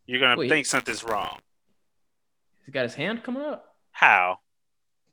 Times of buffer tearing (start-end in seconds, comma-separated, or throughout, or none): 0.68-2.33